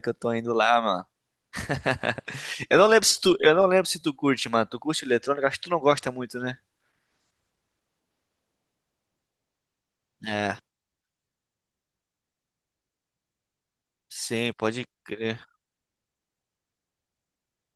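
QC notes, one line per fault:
No faults found in this speech clip. The Opus voice compression leaves only light coding traces, consistent with fullband hybrid coding at around 24 kbps.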